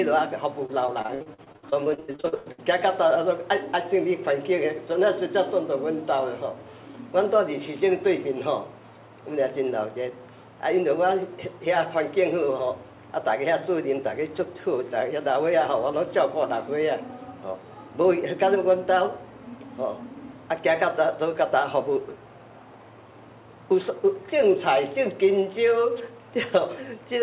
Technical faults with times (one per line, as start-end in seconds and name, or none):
0.66-2.60 repeated packet loss (robotic sound)